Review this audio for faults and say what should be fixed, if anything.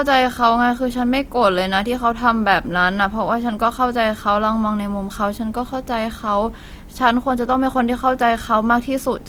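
Throughout the speech, tones sound rough, grainy and noisy while the bandwidth stays full, reaching about 20.2 kHz. This is likely Opus compression in its music mode, which fits a low bitrate near 24 kbps, filling starved bands with folded content or noise. Encoding at a higher Opus bitrate, or keeping an uncompressed master, would prevent it.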